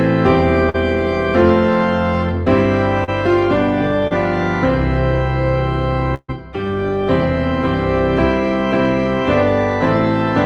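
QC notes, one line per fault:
0.69–0.76 s, 3.04–3.09 s, 4.07–4.13 s: short concealed packet loss. In each spot a brief stretch of audio, about 40 ms at the first two and 20 ms at the third, failed to arrive in time. The decoder covered the hole by extending the preceding sound for 44, 36 and 30 ms respectively, then cross-faded back to real audio. Each event is heard as a short smear or wobble.
6.14–6.30 s: burst of packet loss. Roughly 140 ms of consecutive audio went missing. The receiver stretched the last received sound across 138 ms of the gap and attenuated it as the gap went on, so it decays into a held, fading tone or hiss. The tail end, about 50 ms, drops to silence before the audio picks up again further along, with the material in between absent.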